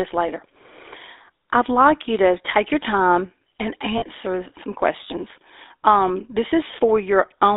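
Throughout, the GSM full-rate codec gives a buzzy, gravelly roughness, which fits 13 kbps; a spectrogram shows energy confined to 300 Hz–3.7 kHz with coarse, pulse-driven harmonics. From 3.98 to 4.03 s, between "take your time and" and "some questions", lost GSM frames repeat the last good frame for 40 ms, which fits two lost frames. It sounds like a brief metallic ring, and the waveform shows a short, repetitive segment.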